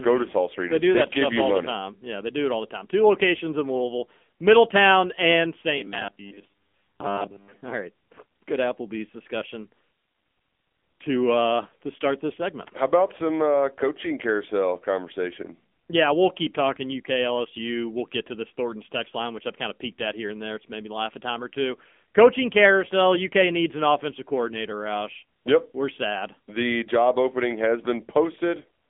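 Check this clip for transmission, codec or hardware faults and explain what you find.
Two faults are present: narrowband mobile coding across the whole recording, and a short robotic stretch.

The AMR narrowband mobile codec is audible from start to finish. The speech has passed through AMR-NB, which models the vocal tract and excites it with sparse pulses. Its damage is plainly audible, a buzzy, synthetic edge that points to a low-rate mode near 8 kbps. The line band runs roughly 200 Hz to 3.5 kHz. On a spectrogram, everything above 3.6 kHz is empty, a hard ceiling across the whole clip. The waveform shows a thin low end.

Robotic sound from repeated short buffers runs from 5.78 to 7.62 s. Audio likely arrived too slowly, and playback filled the gaps by looping a short slice while the real signal was skipped. The buzz sits at 100 Hz, which fits a 10 ms buffer repeated over and over. For most of that stretch the speech becomes a rigid metallic drone that still loosely tracks the syllables. 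A spectrogram shows evenly spaced horizontal harmonics at multiples of 100 Hz, and the waveform shows identical 10 ms cycles.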